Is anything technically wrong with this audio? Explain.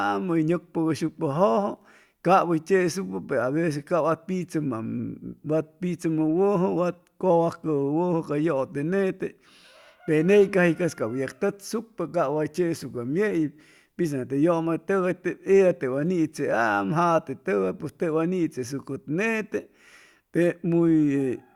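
No, nothing in this speech recording points to a technical fault.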